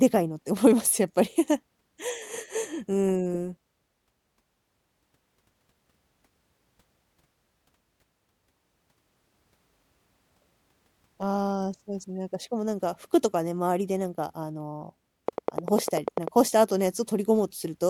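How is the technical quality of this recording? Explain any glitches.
A train of clicks sits near the end of the speech, from 15.28 to 16.29 s: about ten sharp, near-identical ticks at a steady 10.1 per second, peaking well above the speech, roughly 15 dB louder. The regular pulses likely come from electrical interference or a faulty connection or power supply. It sounds like a mechanical ticking laid over the audio. A waveform shows evenly spaced thin spikes, and a spectrogram shows matching full-height vertical lines.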